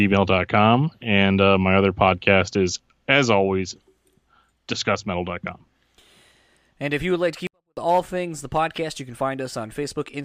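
At 7.47 s, right after "you would like to", the speech drops almost to silence until 7.77 s, before "all things the podcast". This is a 24-bit alignment error. Samples sitting in the low bytes of 32-bit words are read as full 32-bit values. Level falls about 48 dB, clean but nearly inaudible.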